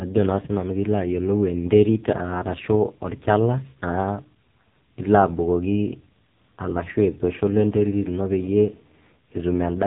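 From start to finish the speech carries AMR narrowband mobile codec damage, and it is heavy. Everything above 3.8 kHz is gone, so a spectrogram shows a flat ceiling with empty space above it, which points to 8 kHz telephone-band sampling. The vocal-tract model runs on very few pulses per subframe, which fits a low 5.9 kbps mode. That leaves the voice buzzy and synthetic, with smeared, blocky harmonics visible in 20 ms steps.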